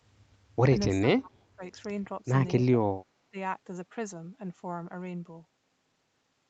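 From 1.0 to 1.62 s, again from 2.6 to 2.74 s and briefly from 3.3 to 3.37 s, the speech sinks or breaks into fragments, most likely speech suppressed in double talk: the echo canceller mistook near-end speech for loudspeaker echo while both sides talked. The first two dips reach around 30 dB, the last around 20 dB. On a waveform the envelope collapses in chunks; on a spectrogram the harmonics, already capped at 8 kHz by the call path, fade or vanish in patches.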